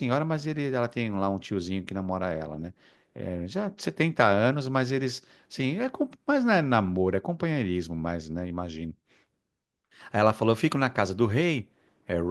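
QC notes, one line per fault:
No faults found on this speech clip.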